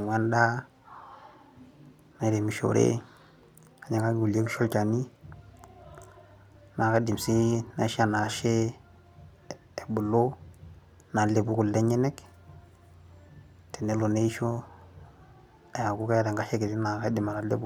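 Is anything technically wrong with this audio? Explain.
No, nothing is technically wrong with this recording. The speech carries no audible technical fault anywhere in the clip.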